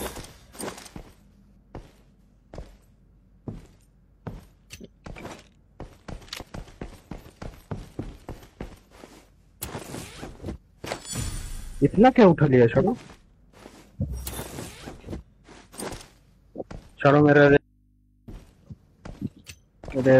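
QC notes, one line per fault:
6.37–6.43 s, 11.24–11.30 s, 15.84–15.90 s: damaged data in a compressed stream. Brief glitches of about 60 ms each, where the decoder misreads corrupt frames and loses sync.
17.57–18.28 s: audio dropout to a faint residue. Signal cuts abruptly for 0.71 s, leaving mains hum roughly 40 dB down, likely from a live input after the source was lost.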